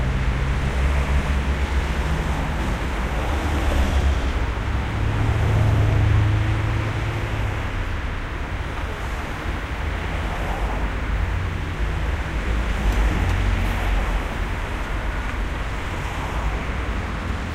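No technical faults can be heard anywhere in this sound.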